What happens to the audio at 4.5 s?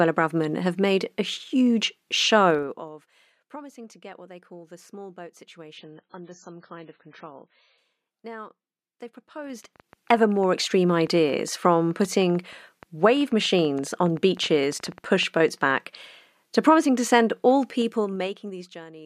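At 4.5 s the speech carries on intact, with no dropout, click, distortion or abrupt level change.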